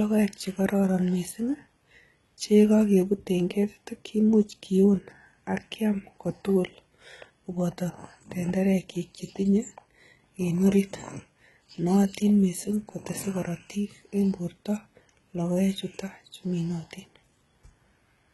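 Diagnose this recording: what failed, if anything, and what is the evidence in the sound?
The speech has a bright but synthetic top end all the way through, with s sounds gone gritty and lispy, and nothing at all above 11.8 kHz. That points to codec-stage damage, likely HE-AAC compression at something around 16 kbps. Spectral band replication is faking the treble from copied lower bands, so the harmonics don't line up.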